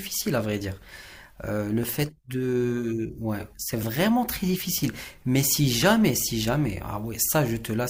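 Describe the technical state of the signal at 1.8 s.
A tiny skip at 1.83 s, where about 15 ms of speech vanishes: an overlap between stream segments, consistent with 2-second segments, trimmed away material that wasn't actually duplicated.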